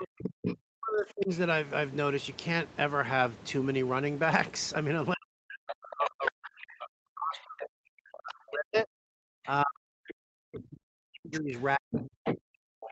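Right from the start, 0 to 1.3 s, the talker's speech ducks hard, by up to about 40 dB for roughly a second, and from 0.18 to 0.56 s a second voice pokes through at nearly the talker's own level. The first is speech suppressed in double talk, likely the echo canceller clamping down because it can't tell the near talker from the loudspeaker echo while both are going. The second is the other side's voice leaking through, likely echo left over in the microphone signal.

The same pairing comes back from 5.14 to 8.9 s, with about three seconds of the talker pushed down. Leakage shows up from 6.04 to 6.67 s at close to full level, then fainter from 7.36 to 8.14 s. At 9.43 to 9.47 s there's a tiny, very quiet scrap of the other voice. From 9.44 s to the end the talker is suppressed again, by up to about 40 dB, and the far voice comes back strongly from 11.35 to 12.88 s. All of it sits within the call's 8 kHz bandwidth.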